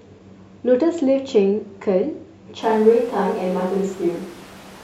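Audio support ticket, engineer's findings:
Speech abruptly turns roomy, hollow, bass-light at 2.63 s, through end. Level about unchanged. Room noise about 25 dB below speech. Likely switch to a distant microphone.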